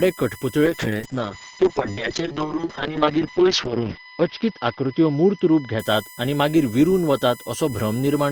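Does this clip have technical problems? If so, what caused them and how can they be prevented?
Yes. A USB whine runs through the whole recording: a fixed-pitch tone with a 1 kHz fundamental and its strongest component at 2 kHz, sitting roughly 20 dB below the speech. The USB bus draws current in 1 ms frames, and that periodic load couples into the audio path through shared power or ground, producing a tone locked to the frame rate and its harmonics. Powering the interface from a clean, separate supply or adding a USB isolator breaks that coupling.

A call bitrate drop affects the speech from 0.67 s to 6.35 s, beginning just before "मागीर विरुन". The connection's bandwidth estimate fell, so the encoder went from 32 kbps down to 8 kbps and stayed at the lowest rate for about 3.4 s. At that rate the coding becomes coarse and the audio bandwidth shrinks from 20 kHz to 6 kHz, so the speech sounds rough and muffled until the bitrate recovers. 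A stable, uncongested network link with enough upstream capacity prevents it.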